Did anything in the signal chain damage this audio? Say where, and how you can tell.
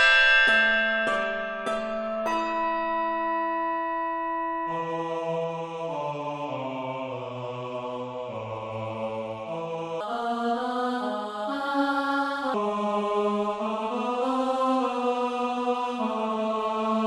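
Yes. From 10.01 s to 12.54 s there is a section at the wrong speed: the sound suddenly runs 1.27 times faster, and its pitch jumps up by about four semitones along with it. Both snap back at 12.54 s. Speed and pitch moving together like this means the samples were read out against the wrong clock, most likely a sample-rate mismatch at the editing or playback stage applied to that one stretch.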